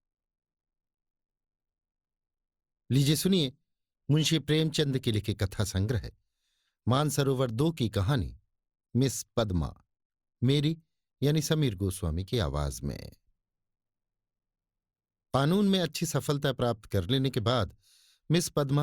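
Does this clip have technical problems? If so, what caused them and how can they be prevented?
No, there are no technical problems to report here.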